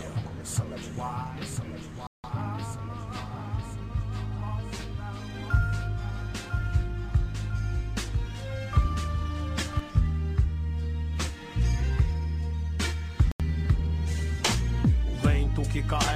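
The sound drops to silence at 2.07 s for 170 ms, resuming at 2.24 s, and again at 13.32 s for 82 ms. These gaps are likely Bluetooth stalls, where delayed packets let the receiver's buffer run empty until retransmitted audio arrived.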